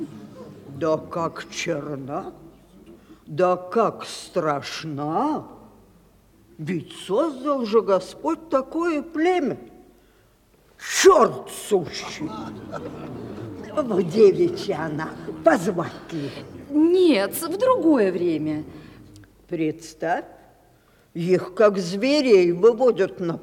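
Listening through the whole recording, nothing stood out as a technical problem at any point.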